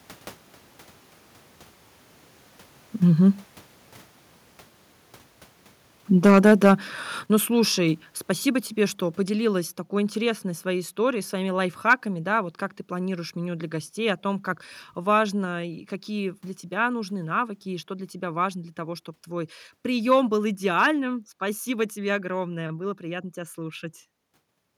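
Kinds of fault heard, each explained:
Microphone overload: The peaks run into the converter's ceiling and get their tops sheared off, giving a harsh, crackly edge. It's strongest from 6.25 to 6.71 s, pushing about 4 dB over with a fair chunk of samples flattened, and briefly again around 11.9 to 11.93 s, most likely from input volume set too high.
Microphone volume stepped down: The whole level, speech and background together, drops abruptly in single steps, starting during that first distorted burst. You hear about 2 dB at 6.27 s, about 6 dB at 7.26 s and about 4 dB at 8.28 s, likely the call software pulling the input gain down because it detected clipping.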